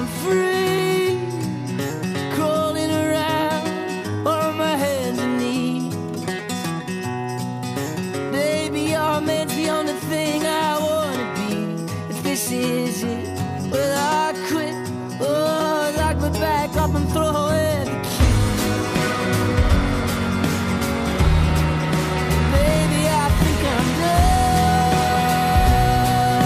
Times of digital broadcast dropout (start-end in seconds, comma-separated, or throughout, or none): none